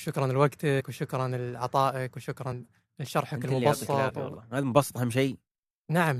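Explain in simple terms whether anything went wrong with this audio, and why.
Small pieces of the compressed file never reached the listener. Whole frames were either missing from the file or rejected by the decoder as damaged, so they were skipped rather than played, which is a fault called compressed frames skipped. The speech jumps forward slightly at 0.79 s, at 2.51 s, and from 4.09 to 4.11 s. Roughly a fiftieth of a second is lost at the first and last spots and about a twentieth at the middle one.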